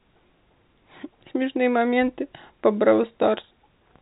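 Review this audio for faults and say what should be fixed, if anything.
Nothing needs fixing: the speech is carried by G.711 A-law telephone coding at 64 kbps, which stops everything above 3.8 kHz as the format does, and its quantisation noise stays faint beneath the speech and follows its level.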